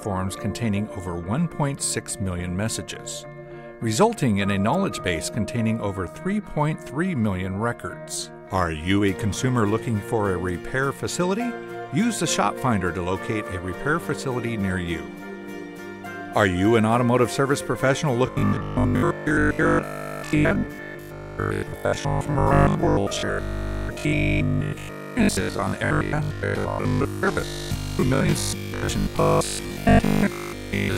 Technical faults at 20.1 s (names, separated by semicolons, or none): robotic sound from repeated short buffers